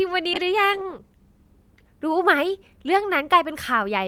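Speech with a call bitrate drop from 0.34 to 3.53 s: the encoding coarsens, sounding rough and watery, and the top end dulls for about 1.1 s at its worst. That fits the bandwidth estimate falling and Opus going from about 48 to 18 kbps.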